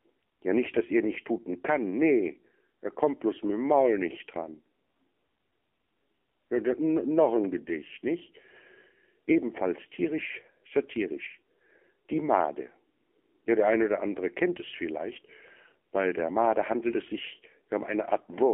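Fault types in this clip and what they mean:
AMR narrowband mobile codec: The speech was carried over a narrowband mobile link that rebuilds each 20 ms frame from a vocal-tract model and a handful of excitation pulses, rather than sending the waveform itself. Here that leaves only a band from about 250 Hz to 3.5 kHz, so the voice sounds thin and boxy, and the coding damage is plainly audible as a buzzy, synthetic edge that fits a low AMR-NB rate of around 7.4 kbps.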